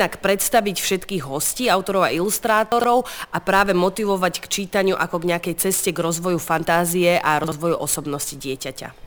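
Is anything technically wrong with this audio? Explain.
Yes. Chunks out of order occur at 2.72 to 2.84 s and 7.44 to 7.52 s. A 40 ms block arrived late, two blocks behind at the first point and one at the second, so it plays after its successors. The sound briefly jumbles at the hard joins.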